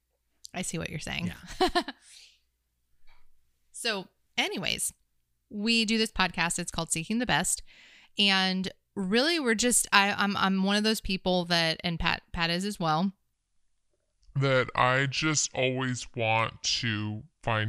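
From 13.33 s to the end at 17.68 s, the voice abruptly drops to a deep, slow drawl, roughly seven semitones lower, with every syllable stretched out. This is a section at the wrong speed: that stretch plays at 0.704 times its original rate, so pitch and tempo fall together. The likely cause is an editor or player handling that portion against a mismatched clock, slowing playback instead of preserving the original timing.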